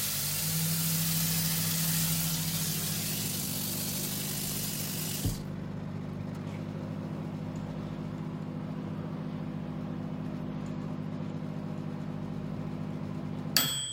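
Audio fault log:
3.26–6.46 s, time-stretched section: the sound suddenly rushes at about 1.74x pace with pitch unchanged, short pieces being dropped to keep the pitch, likely software squeezing it to fit.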